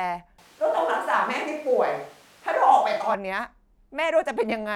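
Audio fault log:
0.39 to 3.14 s, switch to a distant microphone: the speech suddenly turns roomy and hollow, with the low end thinned out, and then snaps back just as abruptly at 3.14 s. The loudness barely changes, but room noise creeps up to roughly 30 dB below the speech. That mix of reflections and lost bass is what you get when the close mic drops out and the recording likely falls back on one much further from the talker.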